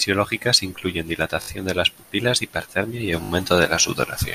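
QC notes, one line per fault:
1.42–1.48 s and 3.24–3.30 s, repeated buffer. Late audio made the device replay its last block. The same slice sounds four times with hard joins, a brief buzzy stutter. This fits a 20 ms buffer. It falls before "de las pupilas hipertermia" and after "las pupilas hipertermia y".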